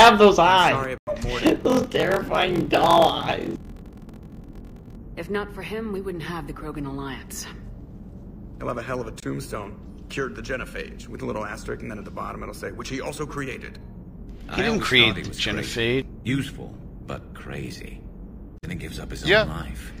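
At 0.98 s the sound drops abruptly into silence until 1.09 s. This is a corrupt frame muted: damaged compressed frames were rejected by the decoder and replaced with silence, consistent with several frames lost.

From 1.4 s to 4.97 s a 43.1 Hz buzz appears and the sound runs at 0.861 times normal speed while keeping its timbre. This is a block size mismatch (padded): one stage writes shorter blocks than the next reads 1024-sample blocks, and the shortfall is zero-filled.

Two further corrupt frame muted holes open suddenly at 9.20–9.24 s and 18.58–18.65 s. Each is silence left where one or two undecodable frames were dropped.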